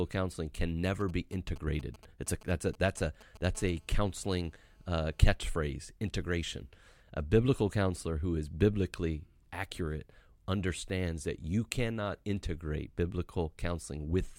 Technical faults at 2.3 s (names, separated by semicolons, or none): GSM signalling bursts